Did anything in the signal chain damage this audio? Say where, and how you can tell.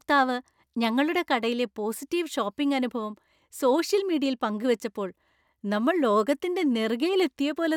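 No, nothing in the signal chain left audible damage on this speech recording. Listening for the marks each stage would leave, from the wiring and converter through to storage and playback, turns up no evidence at any point in the clip.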